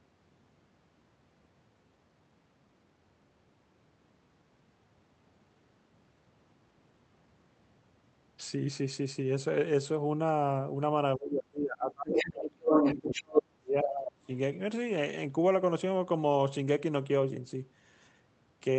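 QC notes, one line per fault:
11.17–12.68 s and 12.95–14.3 s, speech suppressed in double talk: With both sides talking at once, the echo canceller likely could not tell the local talker from loudspeaker echo and attenuated everything. The talker's level dips by roughly 25 to 30 dB, for about 1.5 s each time.
12.08–12.31 s and 12.65–13.43 s, other side's voice leaking through: The echo canceller likely left residual loudspeaker pickup in the microphone signal, so a second voice comes through. It is first a brief scrap a little below the talker, then a longer stretch a little above them.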